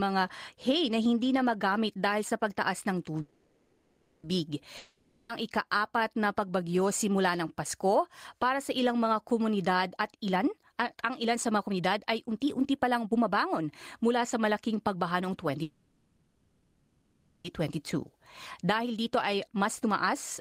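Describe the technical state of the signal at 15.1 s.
A jitter buffer speed-up is under way at 15.1 s, running from 14.03 to 15.58 s. The receiver's buffer had built up more audio than its target, so it trimmed short stretches of one or a few pitch periods, back to back, removing around 150 ms in total. The speech plays at about 108% speed with its pitch unchanged, which is fast enough to sound hurried through this span.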